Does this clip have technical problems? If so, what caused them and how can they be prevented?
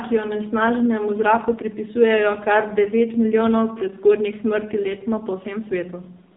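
Yes. AMR narrowband mobile codec damage runs throughout: nothing above 3.7 kHz survives, and the speech is heavily buzzy and synthetic, rebuilt from a vocal-tract model fed by sparse pulses, which fits a low mode near 5.9 kbps. Prevent it by recording locally or using a wideband, higher-bitrate codec.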